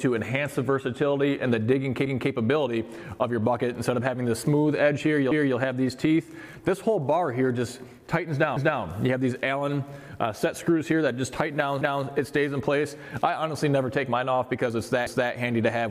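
At 2.06, 5.31, 8.56, 11.81 and 15.06 s the sound stutters: a quarter-second stretch plays, then plays again, each time with a jolt at the join. The even spacing of the stutters gives away overlapping chunks. The audio was handled in 3.0 s blocks, and each new block began 250 ms before the previous one finished, so that overlap is heard twice at every boundary.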